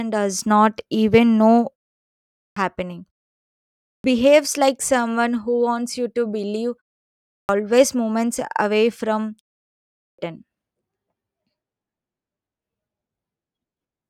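Four times the speech resumes with a clipped start after a pause: at 2.30 s after "does not even know", at 3.80 s just before "behaves like someone", at 7.20 s between "wants you to believe" and "moments away from", and at 9.90 s. Each follows roughly half a second of silence, during which the output falls idle, and the first 240 to 290 ms of sound are lost while it wakes. Each onset bursts in abruptly. On a waveform or spectrogram, the energy starts as a hard vertical edge with no rising attack.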